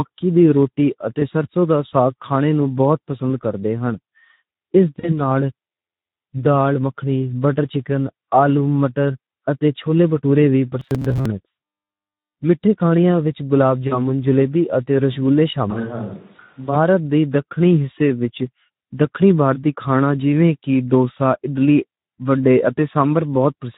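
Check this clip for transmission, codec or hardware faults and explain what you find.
Three kinds of fault are audible in this speech: codec damage throughout, four packet-loss dropouts, and one robotic stretch.

Speex codec damage runs through the whole clip. Starved excitation leaves speech hoarse and noisy, consistent with roughly 11 kbps Speex.

VoIP packet loss concealed by the speech codec occurs at 1.19–1.26 s, between "دی روٹی" and "سرسوں دا ساگ کھانے"; at 4.99–5.21 s; at 13.88–13.99 s, between "وچ گلاب" and "جلیبی اتے رسگلے"; and at 22.77–22.80 s. About 20 to 40 ms goes missing each time. The decoder extrapolates its last frame and fades it out, and the speech stays weak briefly afterwards.

Robotic sound from repeated short buffers occurs at 10.80–11.26 s, after "اتے چھولے بھٹورے وی". It is a rigid metallic buzz near 134 Hz, likely from about 7.5 ms chunks being repeated in place of most of the real audio.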